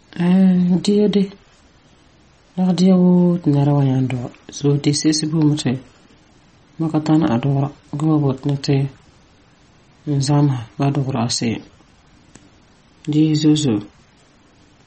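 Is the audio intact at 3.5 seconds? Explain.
No, at 3.5 seconds, like the whole clip, the speech carries MP3 compression damage: nothing above 8.4 kHz, plus watery, swirly artefacts, likely from a starved encoder around 32 kbps.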